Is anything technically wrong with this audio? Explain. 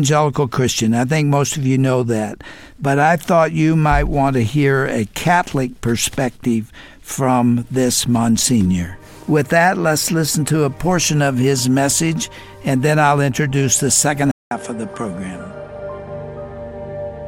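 Yes. At 14.31 s the sound cuts out for about 200 ms, then returns duller, with nothing above 11.4 kHz, a few dB quieter, and with a new background noise floor that sits well below the signal. This holds through to the end. The likely cause is an input switched to a poorer device: the system moved to a different microphone or headset profile with a narrower passband and its own level and noise.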